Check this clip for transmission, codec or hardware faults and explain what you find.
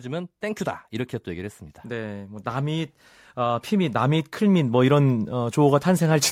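One fault is present: automatic gain rising, from 0.05 s to 6.27 s. The gain control judged the input too quiet and kept raising its gain, by about 12 dB over the clip, so the speech and the background noise swell together steadily rather than holding level.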